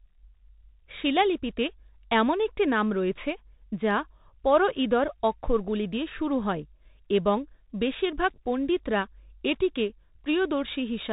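Bluetooth CVSD headset codec damage runs through the whole clip, from start to finish. The speech has been squeezed through a narrowband headset link that encodes each sample as a single up-or-down bit with an adapting step size, which fits a 64 kbps stream. Nothing above 4 kHz survives, so the sound is dull and boxy. Loud, bright moments outrun the step and distort, s sounds turn scratchy, and a granular hiss sits plainly beneath the speech.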